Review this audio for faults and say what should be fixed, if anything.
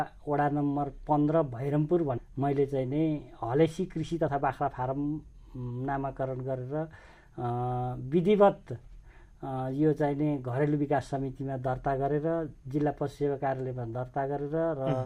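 At 2.17 s the sound jumps abruptly forward with no gap, losing about a second of audio: a skip ahead, where that stretch was dropped either in transit or by the jitter buffer when it overflowed. From 4.03 to 5.49 s the sound runs hurried at unchanged pitch, about 114% speed: a jitter buffer speed-up, trimming pitch-period pieces totalling roughly a fifth of a second. To prevent both, smooth out delayed packet bursts upstream and let the buffer drain more gradually instead of discarding or compressing audio so aggressively.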